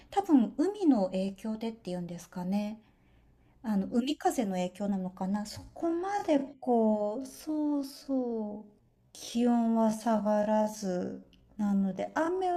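From 5.47 s to the end, the speech slows to about 0.57 times its pace with unchanged pitch, dragging, likely a time-stretched section padded by repeated short pieces.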